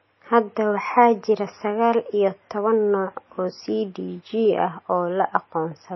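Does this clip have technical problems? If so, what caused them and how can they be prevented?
Yes. Throughout, the speech sounds watery and swirly, with nothing above 5.8 kHz. This is likely MP3 compression at a starved bitrate, around 24 kbps, cutting the treble and switching weak frequency components on and off. Encoding at a higher bitrate prevents it.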